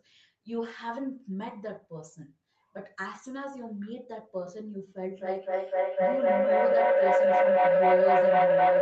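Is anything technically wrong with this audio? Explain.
Yes. From 5.18 s to the end at 8.82 s there is feedback howl: two devices on the same call in one room let sound from a loudspeaker re-enter a microphone, gaining level on each trip. It builds into a tone around 500 Hz, with the loop repeating roughly every 300 ms, and peaks about 12 dB above the speech.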